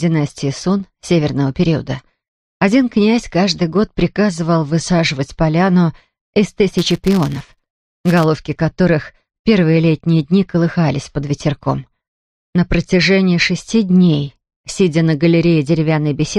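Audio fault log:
6.79–8.25 s, filter restarted on every block: a buzz at about 172 Hz rides on the sound, tracking its level. The filter appears to clear its state at each block boundary, which fits a 256-sample block, so each block opens with a small transient.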